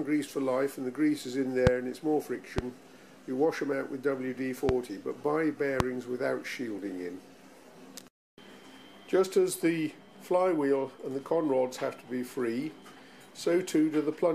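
A sudden voltage step, likely from a plug, switch or static discharge, is injecting short pulses into the signal path, which the following circuits shape into brief bursts. The result is a loud pop at 1.67–1.69 s, 2.58–2.61 s, 4.69–4.72 s and 5.80–5.83 s, each a single sharp thump roughly 20 dB above the surrounding sound, the last one nearer 25 dB. The audio carries on underneath each pop.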